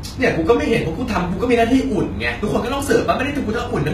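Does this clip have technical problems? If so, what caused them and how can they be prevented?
Yes. HE-AAC compression damage is plainly audible throughout the speech. The likely cause is HE-AAC coding at a very low bitrate, around 20 kbps. The treble is rebuilt from copied lower bands, so s sounds turn gritty and lispy. Nothing is present above 14.9 kHz. To prevent it, encode at a higher bitrate or use a full-band codec such as standard AAC.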